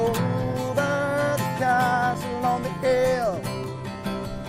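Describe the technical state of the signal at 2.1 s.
At 2.14 s there is a block of digital silence lasting about 5.3 ms. The signal cuts out and returns with no fade, so each edge is a hard discontinuity. A hole this short is too brief to register as a gap and is heard as a single tick or small pop. The length fits one 256-sample output buffer at 48 kHz that was not filled in time.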